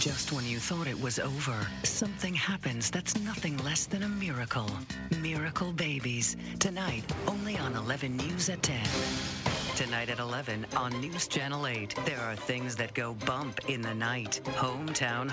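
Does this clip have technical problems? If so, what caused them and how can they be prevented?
No, there are no technical problems to report in this clip. It has been carried over a WebRTC call path, and the audio stops at 8 kHz, which fits a wideband G.722 link.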